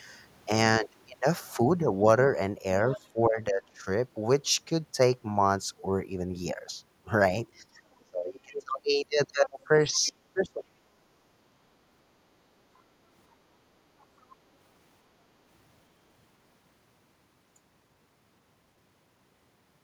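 An echo canceller that likely let part of the far-end loudspeaker signal through into the microphone gives the other side's voice leaking through: faint fragments at 2.89 to 3.07 s, 8.00 s, 9.45 s and 9.92 to 10.12 s. They sit about 15 to 40 dB below the talker. Around the same times, while both sides talk at once, the same canceller likely treats the talker's own voice as echo and turns it down, producing speech suppressed in double talk at 3.13 to 3.87 s, 8.05 to 8.74 s, 9.33 to 9.71 s and 9.99 to 10.77 s. The voice dips, falling by roughly 20 to 30 dB at its deepest, over about 0.2 to 0.7 s in each of these stretches.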